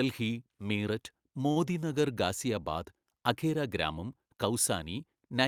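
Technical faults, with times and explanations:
1.51–1.58 s, short stall from a late packet: the jitter buffer ran dry, so the receiver held the last sound for about 46 ms until the packet arrived. Unlike a lost packet, nothing is skipped. Speech resumes exactly where it paused, only slightly later.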